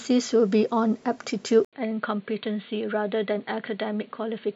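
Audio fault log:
1.65 to 4.55 s, input switched to a poorer device: input likely moved to a lesser microphone, so after an 80 ms gap the speech turns dull and boxy, loses everything above 4.4 kHz, drops roughly 5 dB, and picks up a faint new noise floor.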